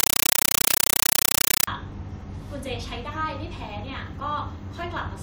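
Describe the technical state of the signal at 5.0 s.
At 5.0 s the speech signal is intact, with no audible fault at that point.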